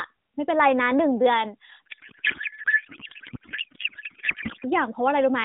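Speech, carried through AMR narrowband at light compression (consistent with its 12.2 kbps mode), has a codec payload misread from 1.86 s to 4.64 s. The octet-aligned AMR packing is being decoded as bandwidth-efficient, so every field is read at the wrong offset, and the voice becomes garbled noise and warble that barely tracks it. Low-bitrate AMR buzz would stay intelligible. This span instead lasts until both sides use the same packing again.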